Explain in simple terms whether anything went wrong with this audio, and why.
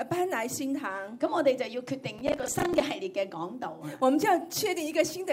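Between 2.19 and 2.81 s there is a burst of processor overload crackle, a gritty tearing laid over the sound. The computer handling the audio fell behind and kept missing the deadline for short chunks, each around 10 ms long. Roughly thirty chunks came too late, and each time a bit of old audio was replayed with hard edges. Those rapid jumps are what sound like crackle, and it stops once the processor catches up.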